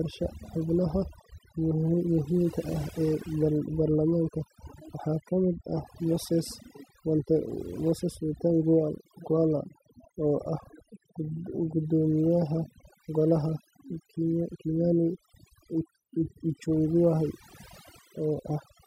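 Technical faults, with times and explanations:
Throughout, overdone noise removal: aggressive noise reduction pushed bands near the noise estimate to near silence, leaving twinkling specks in the background.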